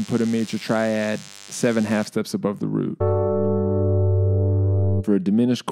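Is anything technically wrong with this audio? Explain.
Yes. From 0.0 to 2.05 s there is DECT cordless phone buzz. A nearby DECT handset or base sends a radio burst every 10 ms. The audio circuit rectifies it. The result is a thin, steady buzz at 100 Hz, rich in harmonics, roughly 20 dB below the signal.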